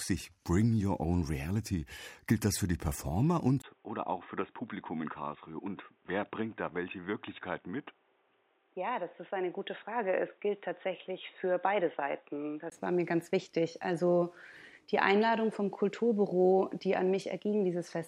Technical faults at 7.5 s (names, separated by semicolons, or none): input switched to a poorer device